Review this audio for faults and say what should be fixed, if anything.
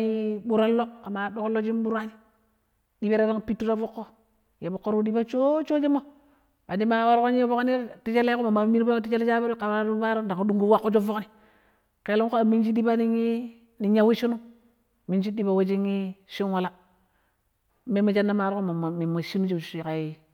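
No faults can be heard in this speech recording. Nothing here needs fixing.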